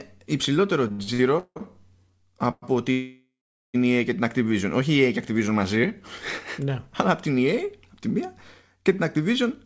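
A speech recording carried over a call connection, whose audio stops at 8 kHz, which fits a wideband codec such as G.722. From 0.88 to 1.62 s the speech drags and judders, with six brief hangs where the last sound is held and stretched, the longest about 170 ms. Roughly half of that stretch is filled-in sound, yet nothing is lost. This is repeated stalls (stutter): packets kept reaching the receiver late, its jitter buffer ran dry over and over, and each time it extended the previous sound until the next packet came. Two call audio freezes follow. At 2.51 to 2.64 s the sound hangs for about 115 ms, ending in a short silence of around 20 ms. At 2.92 to 3.76 s it stretches out for about 820 ms, fading to around 420 ms of silence before resuming where it left off. The likely cause is packets held up in transit, which emptied the jitter buffer, so the receiver bridged the wait and then continued, inserting a gap without dropping any speech.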